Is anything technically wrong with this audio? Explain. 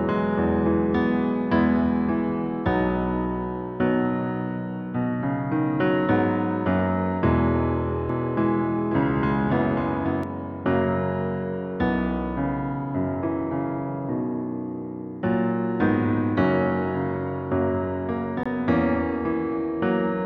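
Yes, there are two problems. From 8.09 to 10.23 s there's a doubled audio track: a second full-band copy of the sound runs roughly half a second behind the original, a few dB quieter. That's likely a second capture path lagging the first, or an edit that left two out-of-step copies stacked. The copy has no decay or room colour, so it sounds like a hard, distinct repeat rather than an echo, and it switches on and off abruptly at both ends.

Then at 18.43 to 18.46 s there's a Bluetooth stall: the audio drops to silence for 22 ms and resumes. The likely cause is interference holding up packets long enough for the headphones' buffer to run dry, so playback paused until the resent data arrived. It's a very brief gap, with the audio carrying on from about where it stopped.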